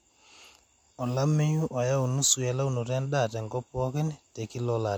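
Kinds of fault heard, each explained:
No technical fault can be heard anywhere in this speech clip. There is nothing here that calls for a line of its own.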